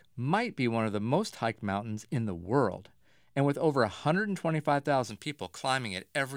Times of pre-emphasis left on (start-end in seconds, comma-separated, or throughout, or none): 5.10-6.37